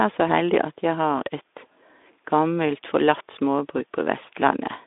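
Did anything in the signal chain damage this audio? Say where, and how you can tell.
No, nothing in the chain has damaged this audio. The speech has passed through a Speex codec at what sounds like a moderate setting of about 15 kbps, leaving a telephone-style band from about 250 Hz to 3.6 kHz with nothing above about 3.8 kHz and only a light coded texture.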